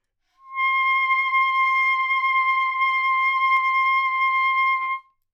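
From 0.95 s to 3.57 s there is a doubled audio track: a second, full-band copy of the sound trails the original by about half a second, roughly 10 dB quieter, with no decay or room colouring. It is likely a slower capture path mixed back in alongside the direct one. It sounds like a dry, flat slapback that switches on and off abruptly. A spectrogram shows each event repeated as a fainter duplicate shifted right, and the waveform carries a smaller echo of every transient.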